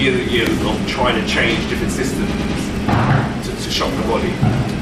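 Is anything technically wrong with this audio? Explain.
Yes, there are two faults.

At 0.47 s there is an electrical switching spike, a sharp snap laid over the sound. It was likely caused by a nearby switch, motor or static discharge arcing briefly, with the audio line picking up that burst of interference.

From 2.34 to 2.55 s there are repeated frames. A block of about 104.5 ms, which fits a short run of compressed frames, was written or delivered more than once, so the decoder plays it two extra times. This produces an audible stutter and stretches the audio by 209 ms.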